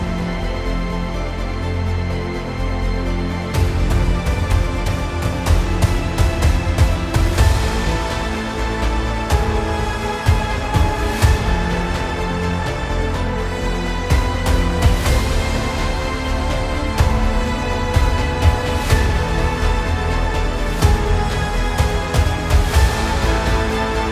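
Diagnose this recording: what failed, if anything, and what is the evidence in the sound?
Nothing in the signal chain shows a failure here; the recording carries no audible dropout, clipping, distortion, hum, timing glitch or level jump at any point.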